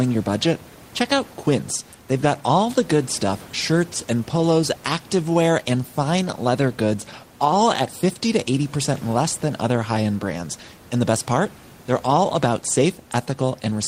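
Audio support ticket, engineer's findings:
No faults found in playback.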